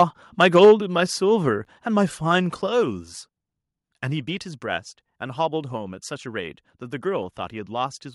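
The microphone's input gain was likely set too high at the start, so the loudest peaks ran past the converter's ceiling. This microphone overload appears from 0.0 to 0.03 s, with peaks about 2 dB over the converter's limit, and again from 0.4 to 0.72 s, about 4 dB over. A small share of samples have their tops flattened, and the voice takes on a harsh, crackly edge through those stretches.

The call software then likely reacted to that overload by lowering the device's input volume in fixed steps. This microphone volume stepped down occurs at 0.65 s, still inside the second clipped stretch, and again at 1.65 s and 2.67 s. Each step cuts about 3 dB at once, about 9 dB in all. Voice and background drop together in sudden jumps, not a smooth fade, so the level sounds like it is being turned down in three clicks, about one second apart.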